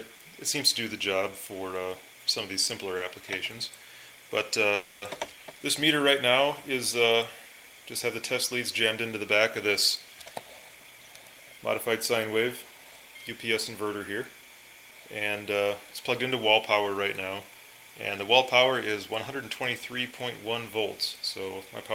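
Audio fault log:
4.75–5.04 s, call audio freeze: the sound stalls for about 0.29 s while the receiver stretches the last sound into a fading buzz for 270 ms, then resumes exactly where it stopped, so nothing is lost but the stream now runs about 270 ms late. Likely delayed packets draining the jitter buffer. On a spectrogram the last frame's spectrum smears horizontally and dims; the waveform shows a decaying repetitive stretch rather than a flat gap.
10.26–11.93 s, jitter buffer speed-up: over this 1.7 s stretch the audio plays about 9% fast at unchanged pitch and sounds hurried, as the receiver trims its backlog by cutting out tiny slices one or a few pitch periods long, roughly 150 ms in total. Harmonic spacing on a spectrogram stays the same while events crowd closer in time; the waveform shows periodic cycles splicing together with small seams.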